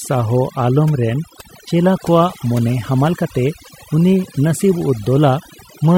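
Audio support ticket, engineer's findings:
Background between phrases drops to near silence for the whole clip, dotted with twinkling, chirpy specks. Quiet syllable tails and soft consonants thin out or vanish. Component: noise reduction stage, overdone noise removal. Mechanism: suppressor set too aggressive, pulling individual frequency bands near its noise estimate far down or fully off, so low-level speech detail is cut along with the noise and the surviving isolated bins flicker on and off as musical noise.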